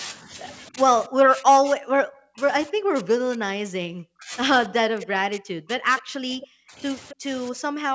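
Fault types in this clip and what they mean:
Speech suppressed in double talk: The voice dips and cuts out in pieces. Brief drops come near 0.21 and 0.69 s, then long, deep losses from 1.08 to 4.33 s and 4.68 s to the end. This is likely an echo canceller muting the talker during simultaneous far-end speech.
Echo leak: Short, faint scraps of a delayed copy of the voice appear at 6.41 and 7.09 s. Each arrives 265 ms late and sits about 20 to 25 dB below the speech. The likely cause is loudspeaker echo the canceller did not fully remove.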